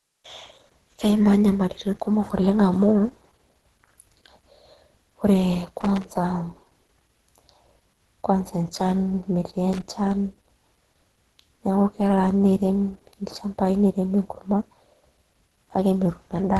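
A speech recording with plainly audible codec damage throughout. Nothing reaches above 12 kHz. The voice sounds muffled and hoarse, with a grainy, rough texture on the upper bands. This is likely Opus compression at a low rate, which fits a bitrate around 16 kbps. The encoder appears to be in its hybrid mode. There, a speech coder handles the low band and sparse band-filling covers the top. That filling is what turns the high end noisy rather than hollow. Separately, there are two bursts of loose connector crackle. The first runs from 5.81 to 6.04 s. The second is shorter, from 9.73 to 9.82 s. Each is an irregular scratchy crackle laid over the speech. It comes from a dirty or worn contact that makes and breaks as it shifts. That chops the signal in rapid, uneven bursts.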